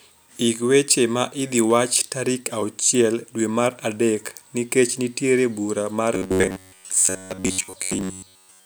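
Speech, and from 6.15 s, right after "adek nikech nitiere bura", it goes robotic to the end: a rigid 94 Hz buzz, likely from repeated short buffers of about 11 ms covering most of the audio.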